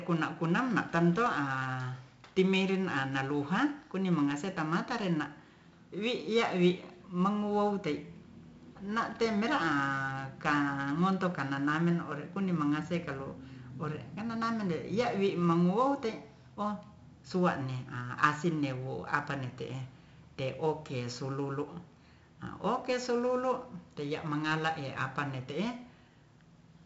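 Throughout the recording, 4-bit ADPCM compression codes each sample as a coarse step from a prediction. The resulting heavy, level-following grit rides on every loud syllable, attacks smear, and nothing sounds above 7.7 kHz, which fits a 64 kbps stream at a low sample rate.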